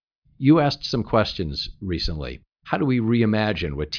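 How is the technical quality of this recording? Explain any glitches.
No glitches can be heard anywhere in this speech recording. There is nothing in it that needs explaining.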